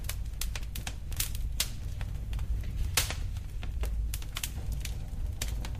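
No technical faults are audible.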